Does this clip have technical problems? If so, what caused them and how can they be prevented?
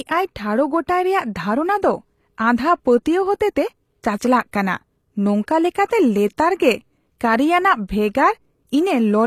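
Yes. The speech has plainly audible codec damage throughout: s sounds come out gritty and lispy, and the spectrum stops at 14.9 kHz. This is likely HE-AAC compression. Only the lower band is actually coded. The treble is rebuilt by copying lower harmonics upward under a coarse envelope, so it no longer matches the original. The level of damage fits a low bitrate of around 24 kbps. To prevent it, encode at a higher bitrate or use a full-band codec such as plain AAC without spectral band replication.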